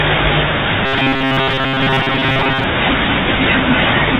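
Speech, carried over a 32 kbit/s G.726 ADPCM link with nothing above 4 kHz, turns robotic from 0.86 to 2.64 s. The sound becomes a rigid, metallic buzz near 134 Hz. The likely cause is repeated short buffers: playback starves and loops a stretch of roughly 7.5 ms. Most of the real audio in that span is skipped.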